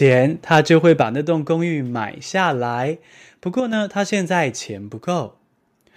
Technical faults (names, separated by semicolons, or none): microphone overload; microphone volume stepped down; one channel drops out